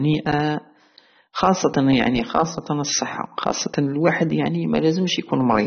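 From start to finish the speech sounds dull and smeared, with nothing above about 6.3 kHz and a warbly, fizzy edge on sibilants. That's likely AAC compression at a low bitrate, around 24 kbps, where the encoder drops the top end and leaves gaps across the spectrum.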